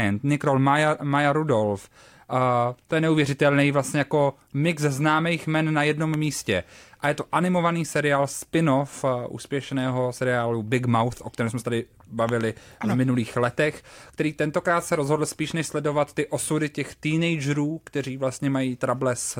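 At 6.14 s, right after "známých men na jednom", there's a loud pop, then a quick double pop from 12.29 to 12.43 s after "kterém jsme se tady", with the speech running on underneath. Each spikes roughly 10 dB above the speech, likely from a voltage pulse such as a plug, switch or static discharge.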